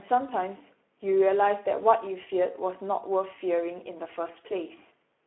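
Speech that sounds noisy and hoarse throughout, confined to a narrow telephone-like band of roughly 250 Hz to 3.4 kHz with nothing above 3.9 kHz. This is Speex codec damage: too few bits for the excitation roughens the voice, which fits a low bitrate near 11 kbps.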